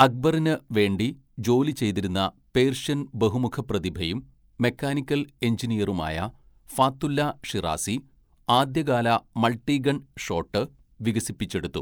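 Nothing stood out on listening to this speech recording.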